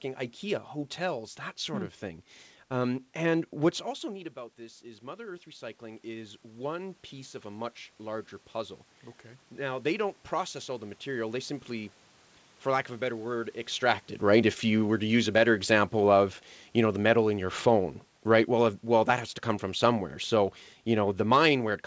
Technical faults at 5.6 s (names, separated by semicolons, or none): automatic gain rising